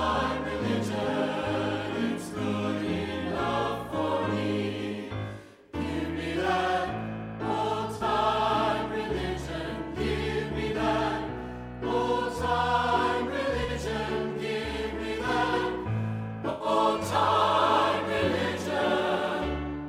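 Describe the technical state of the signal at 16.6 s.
At 16.6 s you're in the middle of an AAC frame loss with concealment, running from about 16.49 to 16.68 s. The gap fits around five lost frames, roughly 107 ms of missing data. The decoder bridges it by reusing the last good spectrum with randomised signs or interpolated energy, so instead of a dropout you get a brief smeared, noisy or phasey patch where the real detail should be.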